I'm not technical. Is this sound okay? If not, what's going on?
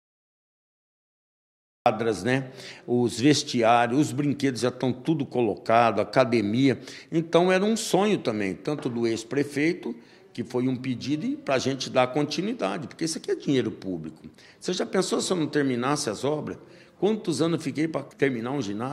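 No. There is a cut-off start at 1.86 s: the first stretch is dead silence, then the sound jumps in already underway, with no natural build-up. The recording began late, so the opening of that sound was never captured.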